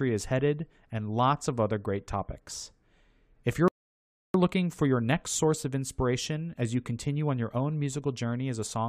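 A rebuffering stall runs from 3.68 to 4.34 s: playback drained its downloaded audio, fell silent about 0.66 s, then resumed exactly at "looking for your next".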